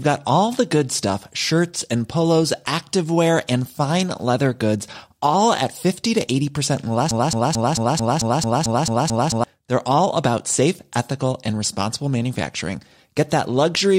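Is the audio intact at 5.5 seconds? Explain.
Yes, the speech at 5.5 seconds is intact, with no audible fault at that moment.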